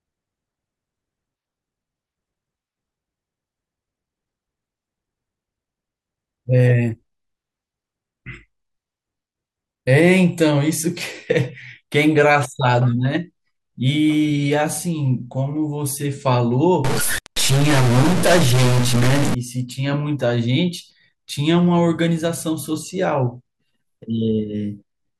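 From 16.85 to 19.35 s the speech turns harsh and buzzy, with a grainy hiss filling the gaps. That's a stuck bit, likely a single data bit jammed, pushing about half the samples off by a fixed step of about -15 dBFS.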